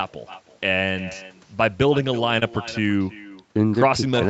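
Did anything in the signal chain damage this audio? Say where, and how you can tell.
Yes. At the far end's call processing there is echo with no canceller. Every phrase returns about 300 ms later, roughly 17 dB quieter, because loudspeaker pickup was never removed.

On the network side, there is a short concealed packet loss at 2.39–2.43 s. About 20 ms never arrived, so the decoder extended the preceding sound, leaving a brief smear before blending back.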